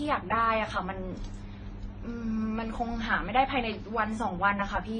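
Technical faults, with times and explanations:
Throughout, transcoding between lossy codecs: the speech has nothing above 9.4 kHz, so it sounds dull and band-limited, and several kinds of coding artefact are heard together rather than one consistent texture. The likely cause is a chain of low-bitrate encoders, pointing to WMA and then AAC-LC at around 32 kbit/s, finished as MP3 at around 48 kbit/s. Each stage spent its bits re-coding the previous stage's damage, added its own, and kept the lowest cut-off in the chain.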